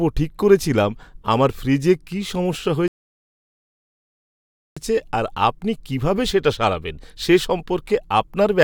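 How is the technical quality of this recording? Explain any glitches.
The speech has one glitch, a rebuffering stall. From 2.88 s to 4.77 s, after "আমার ফ্রিজে কী সমস্যা", the player ran short of downloaded audio and paused, adding about 1.89 s of silence. Playback then resumes exactly where it stopped, at "আর আপনি কীভাবে সেটা". Unlike a dropout, no audio is skipped or lost. The gap only adds time.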